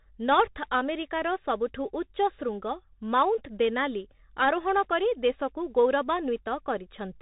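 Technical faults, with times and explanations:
Throughout, Bluetooth CVSD headset codec: the speech is confined below 3.8 kHz, and the damage is plainly audible. CVSD sends a single up-or-down bit per sample and adapts its step size. Loud, fast high-frequency movement therefore outruns the step and breaks up, s sounds turn scratchy, and a fine granular hiss sits under the speech. That grainy texture, which fits a 64 kbps stream, sets it apart from a clean band limit or a frame-based narrowband codec.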